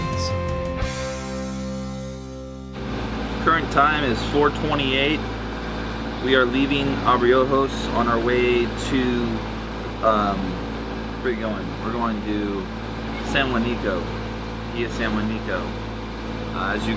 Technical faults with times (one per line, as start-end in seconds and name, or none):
none